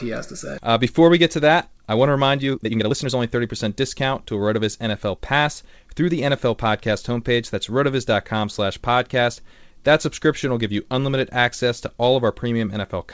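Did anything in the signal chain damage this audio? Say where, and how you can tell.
Yes. At the network and jitter-buffer stage there is a skip ahead at 0.58 to 0.60 s: the speech jumps forward with no gap filled, and roughly a second and a half of audio is missing. A stretch was dropped while later packets were already queued, splicing the two sides almost directly.

Right after, from 0.68 to 7.56 s, a jitter buffer speed-up runs the speech at about 114% speed with unchanged pitch, so it sounds hurried. Having overfilled, the buffer trimmed many short pitch-period pieces in succession, about a second in total, to reduce latency. This passes through a G.722 call path with nothing above 8 kHz.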